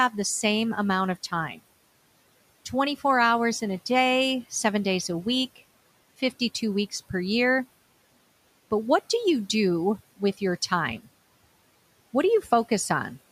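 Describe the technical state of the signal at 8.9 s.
At 8.9 s a channel delay (comb filtering) sets in and lasts to 13.32 s. One channel lags by roughly a single sample, and summing to mono cancels the top near 20 kHz, dulling the highs. A spectrogram shows a darkened band at the very top.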